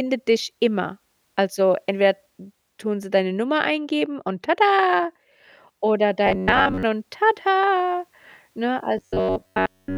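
Audio likely arrived too seldom, so roughly 11 ms chunks were repeated. From 6.26 to 6.83 s, before "und tada ne", and from 8.98 to 9.97 s, after it, speech becomes a rigid 94 Hz metallic buzz: robotic sound from repeated short buffers.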